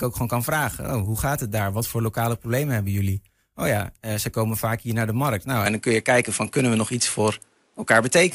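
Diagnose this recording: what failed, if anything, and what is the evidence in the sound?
At 5.66 s the speech turns duller until the end, with no gap. Nothing remains above 11.4 kHz. Level shifts roughly 5 dB, and new noise sits about 45 dB down. Likely cause: input switched to a poorer device, at the driver stage.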